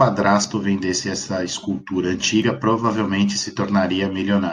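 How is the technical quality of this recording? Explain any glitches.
The recording has two small glitches, both from an overlap between stream segments. At 0.44 s and 2.42 s, timestamps of adjoining 2-second segments overlapped, so a few milliseconds of sound that was never duplicated got trimmed away. The waveform jumps there, producing a brief click or skip.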